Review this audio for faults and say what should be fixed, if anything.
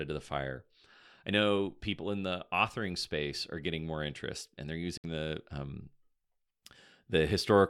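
There's a digital broadcast dropout in the speech from 4.98 to 5.04 s. The receiver muted for about 64 ms, which fits a couple of frames failing their checks. A stronger signal or better antenna placement at the receiver would prevent it.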